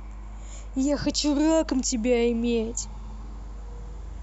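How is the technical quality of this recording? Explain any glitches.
A steady low drone of mains hum sits under the speech for the whole clip, pitched at 50 Hz with a few low harmonics stacked above it. It is fairly prominent, roughly 15 dB below the speech, so it stays audible through the pauses and thickens the low end throughout. The cause is power-line current leaking into the signal path, typically through a ground loop between connected equipment or induction from a nearby transformer.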